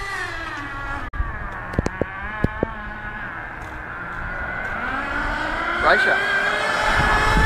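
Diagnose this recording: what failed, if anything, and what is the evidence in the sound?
The failure is in reception, a digital broadcast dropout: at 1.08 s the sound fades out over about 8 ms and stays silent until 1.16 s, with roughly 43 ms of programme lost, which points to a single corrupted frame. The receiver muted when that frame failed and resumed on the next good one. Unlike a buffer underrun, the edge is a short fade rather than a click, and the sound picks up later with nothing delayed.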